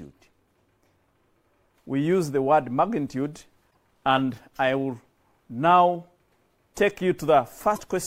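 At 3.70 to 3.76 s and again at 7.75 to 7.80 s, the audio jumps ahead and the next 50 to 70 ms come out garbled, roughly two 26.1 ms frames each time. This is likely a broken MP3 bit reservoir: frames were lost, so the following frame looked back for its borrowed data and decoded bytes belonging to a different frame. The result is a brief corrupted burst at each cut rather than a clean splice.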